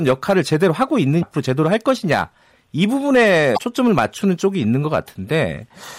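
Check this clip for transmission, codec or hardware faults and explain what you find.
Two faults are present in the speech. Hard clipping runs throughout: the signal is overdriven by about 7 dB, so around one percent of samples exceed the converter's limit and are cut flat, adding harsh crackle on peaks. Damaged data in the compressed stream occurs at 1.19 to 1.23 s and 3.54 to 3.58 s. Corrupted frames there make the decoder lose sync and search for the next frame header, producing a brief glitch in each span.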